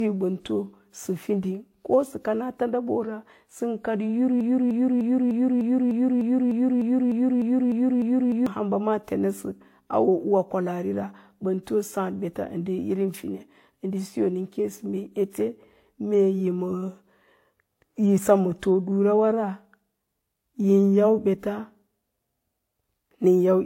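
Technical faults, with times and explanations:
Throughout, transcoding between lossy codecs: nothing above 16.3 kHz, with layered smeary artefacts, likely from a low-rate HE-AAC pass then re-encoded to WMA.
4.41 to 8.46 s, broken-record loop: a 0.3 s fragment repeats 13 times back to back, likely a stalled stream resending its last chunk, losing the audio underneath.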